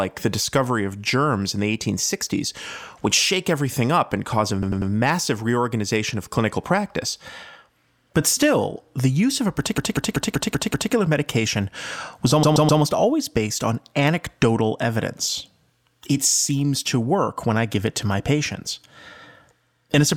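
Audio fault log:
4.62–4.91 s, 9.78–10.93 s, 12.43–12.82 s: repeated frames. A compressed block of 96 ms, 192 ms and 128 ms plays again 3, 6 and 3 times, giving a stutter. On the waveform and spectrogram, identical tiles repeat side by side.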